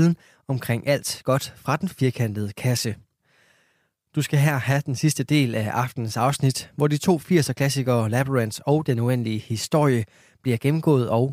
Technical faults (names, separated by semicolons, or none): none